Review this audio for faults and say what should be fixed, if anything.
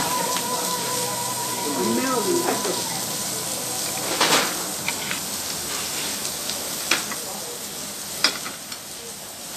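Vorbis compression throughout: nothing above 14.2 kHz, with grainy hiss and roughened tones, likely from coarse treble quantisation pointing to a low bitrate near 36 kbps. Prevent it by encoding at a higher Vorbis quality setting, or by keeping a lossless master for review.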